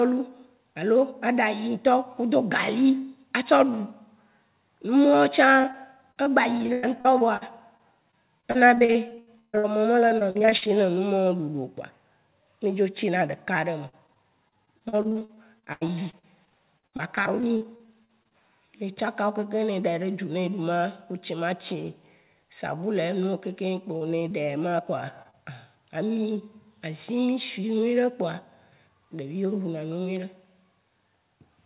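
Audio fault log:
5.62–10.76 s, repeated packet loss (robotic sound): packets kept dropping or arriving late, 34 gaps here, the longest about 146 ms. Each hole gets patched by stretching the last bit of sound, so about a fifth of this stretch is filler, and that's where the choppy quality comes from.
13.89–18.33 s, repeated packet loss (robotic sound): same thing again, 37 gaps with the longest around 85 ms. Roughly a fifth of the stretch is concealment, and the constant patching of one hole after another gives it that chopped-up, robotic edge.
23.97–24.33 s and 25.22–25.35 s, short concealed packet loss: five little dropouts, at 23.97, 24.19, 24.29, 25.22 and 25.31 s, each 20 to 40 ms. The receiver bridges them by continuing the previous sound and blending back, so you hear brief smears or wobbles.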